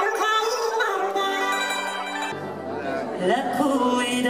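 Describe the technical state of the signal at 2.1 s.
At 2.1 s the sound is running fast and pitched up by an octave, because the audio is being read two samples at a time (double speed). This lasts from the start to 2.32 s. The reader takes each pair of samples as one frame, as if the stream were stereo or used wider samples, so playback runs at 2.0 times speed.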